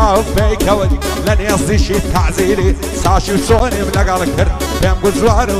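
At 3.59 s there is a block of digital silence lasting about 12 ms. The sound cut out and back with no fade, leaving a tick or dip.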